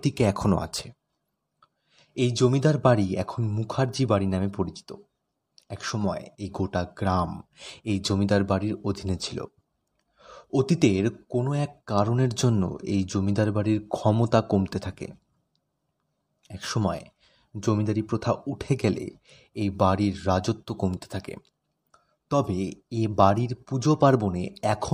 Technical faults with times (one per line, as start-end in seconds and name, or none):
none